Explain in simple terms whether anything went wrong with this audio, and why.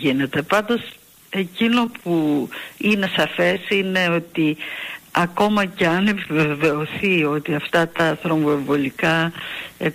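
A steady, raspy buzz comes in at about 7.96 s and runs quietly under the sound until the very end of the clip. This is mains buzz. The electricity supply here alternates 60 times a second, and something like a light dimmer, a power adapter or a poorly shielded cable sends sharp little spikes into the audio twice on every cycle. Those spikes stack up into a rough, buzzing tone with many higher overtones.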